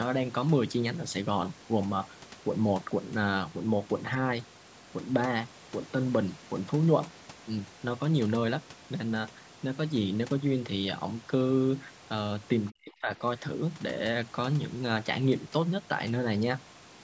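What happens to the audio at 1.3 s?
Nothing goes wrong at 1.3 s: the speech passes through intact, with only the ordinary call microphone processing, which trims the lowest bass and leaves nothing above 8 kHz.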